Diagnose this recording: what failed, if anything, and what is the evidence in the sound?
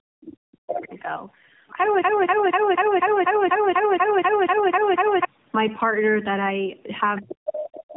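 Call processing, codec stage: tandem speech coding runs through the whole recording. The speech has nothing above 3.7 kHz and sounds rough, muffled and warbly, more degraded than one narrowband coder would leave it. That points to several speech codecs in series, consistent with AMR-NB-type coding at the ends and other coders in between. Each transcoding step decodes and re-encodes the previous coder's damaged output, so the artefacts stack.

Call processing, echo canceller: speech is suppressed in double talk from 0.00 to 0.92 s. Across most of that stretch the talker's level falls away in dips, with the deepest drop around 40 dB, so parts of the speech are nearly gone. The likely cause is the canceller failing to tell the near talker from loudspeaker echo while both sides spoke, and attenuating everything to be safe.

Playback, buffer or stream stage: a broken-record loop runs from 2.02 to 5.25 s. 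A fragment of about 245 ms repeats exactly, back to back, 13 times, and whatever should have played in those three-odd seconds is missing. The likely cause is a stalled player, encoder or stream that kept re-sending the last block it held instead of new audio.

Call processing, echo cancellation again: the other side's voice is leaking through from 7.81 s to the end. A second voice sits about 20 dB below the main speech. The likely cause is residual echo: the far end was played over the device's loudspeaker, picked up by its microphone, and not fully removed by the canceller.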